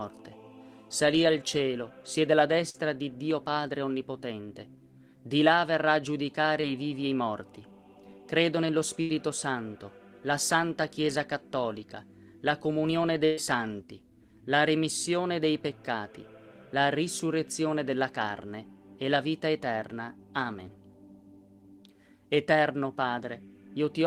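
At 2.69 s, 9.01 s and 13.25 s, bursts of packet loss left holes of 40, 80 and 120 ms. The receiver extended the last sound and let it decay, giving a held buzz or fading hiss before playback resumes with that stretch gone. At 6.61 s, short concealed packet loss dropped 20 ms, which the decoder patched by continuing the preceding sound and crossfading back, leaving a brief smear or wobble.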